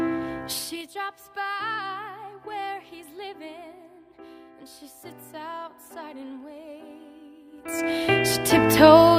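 Zipper noise appears from 0.45 to 0.90 s as the level falls by roughly 25 dB, and again from 7.46 to 7.86 s as it rises by about the same amount. Each move comes in 3 dB jumps, around twenty a second, with no smoothing, so every jump clicks and the clicks run together into a zipping tick over the fade.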